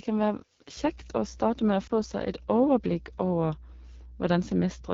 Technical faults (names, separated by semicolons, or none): AMR wideband (HD Voice) codec; mains hum; lost AMR speech frames